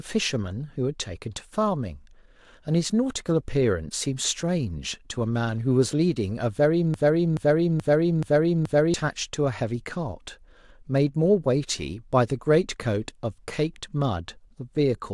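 A broken-record loop runs from 6.94 to 8.94 s in this speech recording: a 428 ms fragment plays back to back five times, identical on every pass, before the audio moves on. The cause is likely a stalled player, encoder or stream that kept re-sending the last fragment it held while no new audio arrived. Whatever should have been heard during those two seconds is missing, replaced entirely by the repeats.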